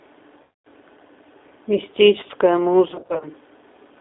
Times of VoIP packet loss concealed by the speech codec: 0.43-0.65, 2.88-3.27

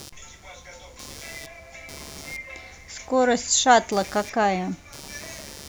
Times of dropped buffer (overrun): none

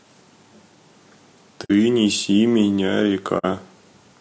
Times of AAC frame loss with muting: 1.64-1.71, 3.38-3.45

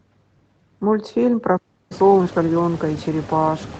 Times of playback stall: 1.57-1.91

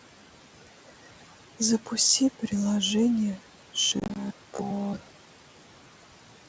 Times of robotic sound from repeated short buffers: 3.81-6.48

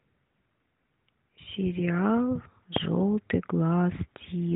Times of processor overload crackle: none

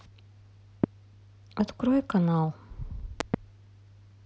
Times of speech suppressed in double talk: none

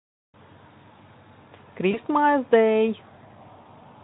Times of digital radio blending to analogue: none

